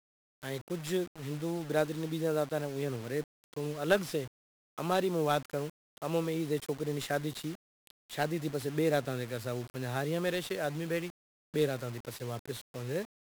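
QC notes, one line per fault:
Throughout: 1-bit DFPWM compression. The speech is fuzzy and crackly from start to finish, with a strong broadband hiss burying the treble. Each sample keeps only one bit nudging an adaptive level up or down, so heavy quantisation noise results, consistent with a 48 kbps DFPWM stream.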